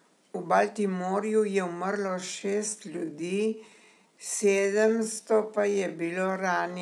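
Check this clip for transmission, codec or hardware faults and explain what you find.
One fault stands out, a time-stretched section. From 2.02 s to the end at 6.82 s, the speech slows to about 0.74× with pitch unchanged, likely from software repeating short segments to fill length. It drags; a spectrogram shows stretched harmonics and the waveform shows repeated grains.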